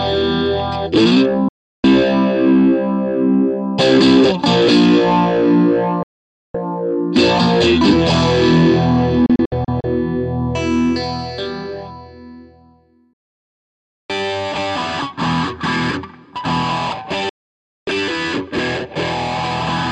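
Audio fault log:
1.48–1.84 s, 6.03–6.55 s, 9.26–9.84 s, 13.13–14.10 s, 17.29–17.88 s: digital broadcast dropout. The receiver mutes bad frames with 3 ms fades, leaving flat waveform gaps and blank spectrogram columns. At 9.26 s the dropout is scattered holes up to 64 ms.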